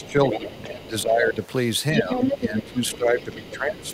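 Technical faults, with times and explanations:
0.00–0.87 s, other side's voice leaking through: a second voice sits about 10 dB under the talker, likely loudspeaker echo the canceller didn't fully strip out.
0.00–1.42 s, speech suppressed in double talk: the talker dips by up to about 10 dB for around a second, likely the canceller ducking everything while both sides overlapped.
1.98–3.94 s, other side's voice leaking through: the far voice comes back stronger, only about 5 dB below the talker, likely echo getting past the canceller again.
1.98–3.94 s, speech suppressed in double talk: deeper ducking here, up to about 15 dB over roughly one and a half seconds, likely the canceller clamping down on both talkers at once.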